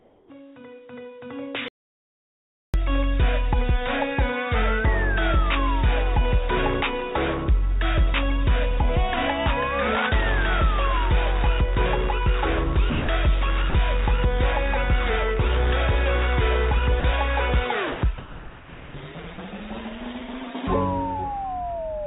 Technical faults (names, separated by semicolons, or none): comfort noise in place of the background; onset clipped by the voice detector; audio dropout to silence; sound dropped by the voice detector